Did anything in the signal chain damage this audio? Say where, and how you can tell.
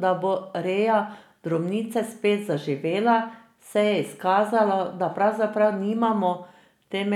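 No, nothing along the chain seems to have left a mark on this speech recording; it just sounds the way it went in.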